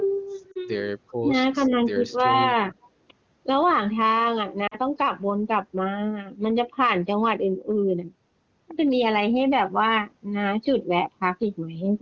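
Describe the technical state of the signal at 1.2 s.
At 1.2 s the speech level suddenly drops, by roughly 20 dB at its deepest, and stays down in patches until about 1.33 s, with around a tenth of a second affected in total. This is likely speech suppressed in double talk: with both ends talking at once, the echo canceller could not tell the near talker from loudspeaker echo and attenuated everything, so the voice briefly sinks and partly breaks up before recovering.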